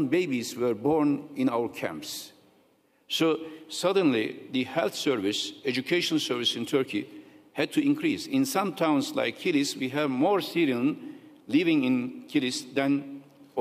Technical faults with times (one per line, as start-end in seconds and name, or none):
none